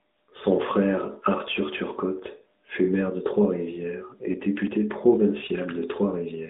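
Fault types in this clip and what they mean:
AMR narrowband mobile codec: The whole clip passes through the narrowband mobile speech codec, which rebuilds speech from a vocal-tract model and a sparse pulse excitation. The band runs from about 200 Hz to 3.7 kHz, with nothing above it. The damage is plainly audible as a buzzy, synthetic edge, at a level that suggests a mid-range rate around 10 kbps. Unlike a plain telephone band-limit, the coarseness lies in the voice texture itself, not just in the missing highs.
Lost AMR speech frames: At about 4.32 to 4.36 s there is a brief dip or warble. This fits the loss of a single 20 ms frame, where the decoder stood in with the previous pitch and vocal-tract settings at reduced gain. Because the loss is so short, the sound does not stretch out or fade to silence, and speech resumes almost at once. That sets it apart from a dropout or click, which leaves a hard gap or a sharp transient rather than a smeared, concealed patch.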